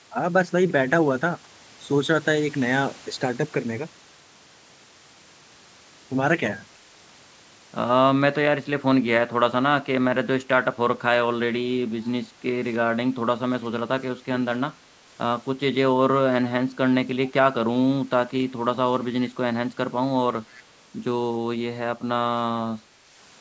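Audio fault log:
12.04–12.10 s and 20.49–20.63 s, echo leak: A brief, faint copy of the speech comes back 315 ms late. It sits far below the voice, a little louder the second time. The likely cause is a far-end loudspeaker whose echo canceller let scraps through.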